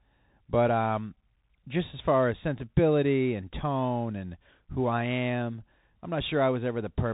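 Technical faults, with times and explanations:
Throughout, Bluetooth CVSD headset codec: the speech sounds boxed-in and telephone-like, with nothing above 3.8 kHz, scratchy, rough s sounds, a grainy hiss beneath the voice, and distortion on loud, bright moments. CVSD sends one bit per sample, each saying only up or down, with an adapting step size, which fits a 64 kbps stream. When the waveform moves faster than the step can follow, the tracking breaks up, and its constant small errors leave that granular noise floor.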